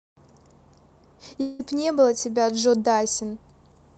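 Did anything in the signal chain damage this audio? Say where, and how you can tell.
Yes. Between 1.41 and 1.61 s the speech breaks off for about 180 ms and does not pick up where it left off. That gap is filled almost entirely with a buzzy continuation of the last sound, fading rather than dropping to pure silence. That smeared, held tone is receiver concealment. The stage is the network, likely a long network dropout on this Opus call path. When the speech returns, the lost stretch is simply gone.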